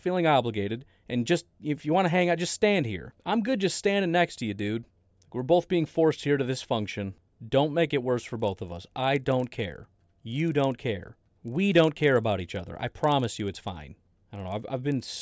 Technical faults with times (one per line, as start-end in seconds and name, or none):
8.36-15.22 resampler restarted on every block